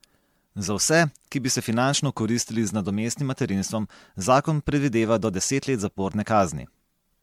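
Speech with generation loss throughout: swirly, hollow and smeared, likely from about seven MP3 re-encodes near 96 kbit/s; a spectrogram shows scattered holes and blurred onsets.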